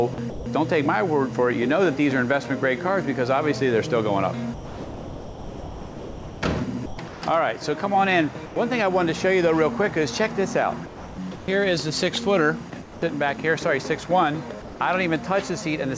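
A voice detector at the sender, likely misjudging quiet passages, switched sending on and off in bursts, so short stretches of the audio are chopped into comfort noise at 0.14–0.46 s, 6.86–7.22 s, 10.86–11.48 s and 12.70–13.02 s. The same detector, likely treating quiet sound as background, also stopped sending outright, dropping the sound in favour of steady noise from 4.54 to 6.42 s, for 0.1 s at 8.46 s, and from 14.62 to 14.80 s. Gain pumping, likely from input gain set far too high with a fast limiter pulling it back, swings the level by around 5 dB. The clip also passed through a call path whose codec, consistent with G.722 at 64 kbps, leaves nothing above 8 kHz.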